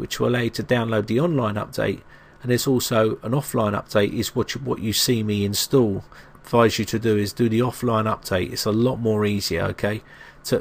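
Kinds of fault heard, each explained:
Nothing stood out on listening to the recording.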